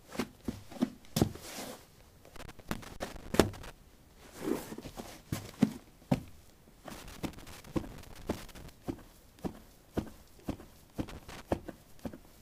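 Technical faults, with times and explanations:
2.36–3.72 s, 6.91–8.69 s and 11.08–11.42 s: loose connector crackle. A worn or dirty contact in the signal path is intermittently losing and regaining connection as it shifts, so the audio is rapidly switched on and off in an uneven rhythm. Each break and reconnection leaves a small discontinuity in the waveform, and their irregular clustering is heard as bursts of scratchy crackle lasting from about a third of a second to nearly two seconds.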